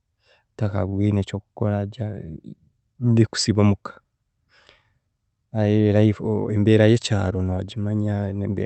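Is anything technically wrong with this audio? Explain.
Yes. There is a short stall from a late packet at 0.89 to 0.94 s. The jitter buffer ran empty, so the receiver stretched the last sound by 31 ms and then resumed from the same point with nothing lost. This leaves the speech briefly held, with a slight buzz or dip. The audio also passes through a call codec path, audible as a top end that stops near 8 kHz.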